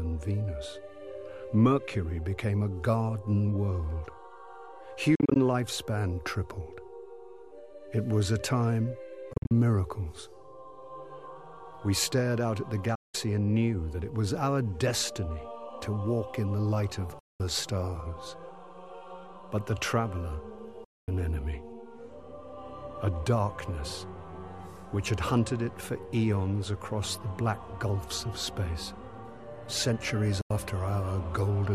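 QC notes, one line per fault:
5.15–5.36 s, Bluetooth dropout. About 116 ms of sound vanishes in short holes spread over 203 ms, longest 44 ms. Likely late wireless packets; playback resumes as if uninterrupted.
9.33–9.51 s, Bluetooth dropout. Broken gaps totalling about 131 ms across 174 ms, longest 44 ms. Likely dropped wireless packets; sound returns further along, nothing held back.
12.95–13.15 s, Bluetooth dropout. One solid silence of 189 ms. Likely packets missing their deadline; sound picks up later, as though it had kept playing.
17.19–17.40 s, Bluetooth dropout. A 203 ms hole. Likely lost wireless packets muting the output; sound resumes at a later point, skipping what fell inside.
20.84–21.08 s, Bluetooth dropout. The longest gap, 232 ms of silence. Likely lost packets; audio comes back ahead, the missing stretch simply gone.
30.41–30.51 s, Bluetooth dropout. A brief 87 ms silence. 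Likely late packets discarded; sound continues from a later point.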